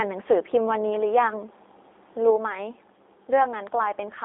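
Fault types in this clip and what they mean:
G.729 codec: The speech has a rough, slightly synthetic texture and nothing above 3.8 kHz, with a 300 Hz to 3.7 kHz telephone band, which points to an 8 kbit/s G.729A voice codec. Unlike simple low-pass filtering, the roughness comes from the codec modelling the voice rather than just removing treble.
Sudden gain jump: At 2.30 s the level drops by about 4 dB in a single step and stays lower to the end. Speech and background fall together with no ramp, which sets it apart from a fade and points to a likely unramped gain change.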